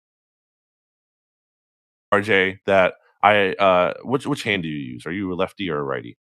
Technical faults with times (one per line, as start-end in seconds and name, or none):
0.00-2.12 audio dropout to silence